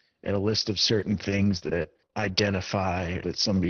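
From 1.00 to 2.31 s the speech turns choppy and robotic, broken by seven brief holes, the longest 31 ms. This is repeated packet loss: packets went missing in quick succession, and each gap was patched by extending the preceding sound, roughly a fifth of a second altogether.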